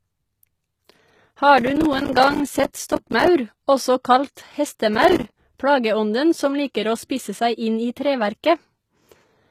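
A speech recording whose encoder was likely HE-AAC at a low bitrate, which fits about 20 kbps. Spectral band replication rebuilds the treble from copied lower bands, so the HE-AAC compression is plainly audible: the treble is synthetic, s sounds lose their natural shape, and nothing remains above 14.9 kHz. Separately, the processor twice failed to fill its short audio buffers on time, leaving a rapid run of brief silent gaps, each around 5 ms. This processor overload crackle is heard as a burst of gritty tearing from 1.58 to 3.28 s and again from 4.95 to 5.34 s, just before "plageånden som liker å".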